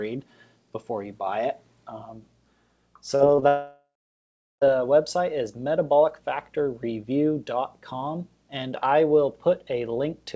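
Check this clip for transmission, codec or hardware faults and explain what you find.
Two transmission faults appear, both between 3.16 and 4.63 s, over a call path whose bandwidth ends at 8 kHz, consistent with G.722 at 64 kbps.

Short concealed packet loss occurs at 3.16 to 3.22 s, then 3.36 to 3.44 s in two adjacent 20 ms gaps. The receiver extends the preceding sound, giving brief smears or wobbles.

A long network dropout, likely, runs from 3.48 to 4.63 s. About 1.1 s was lost. The concealed sound fades into roughly 0.74 s of silence before the audio resumes with that stretch missing.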